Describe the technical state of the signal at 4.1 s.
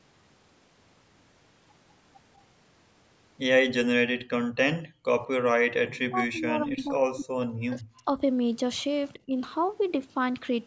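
At 4.1 s the speech is intact, with no dropout, distortion or other fault, and only the normal band limit of call microphone processing, which leaves nothing above 8 kHz.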